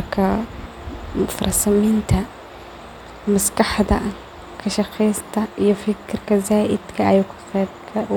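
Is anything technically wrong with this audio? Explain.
No, I hear no technical faults anywhere in this speech recording.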